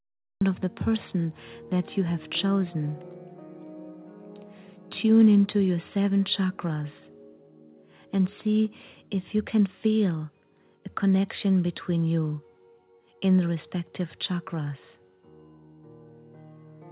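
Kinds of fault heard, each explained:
Cut-off start: capture began late, so the clip holds digital silence until 0.41 s and then drops straight into a sound already under way, with no natural attack or fade-in. What follows carries the narrow, 4 kHz-limited sound of a G.711 call path.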